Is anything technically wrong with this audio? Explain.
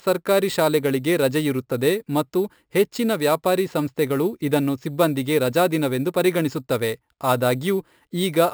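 Yes. Imaging from sample-and-hold upsampling runs throughout. Each sample was repeated without smoothing, which fits a 12 kHz source. This mirrors the speech into 6 to 12 kHz at about -19 dB, heard as a metallic fizz that follows the speech.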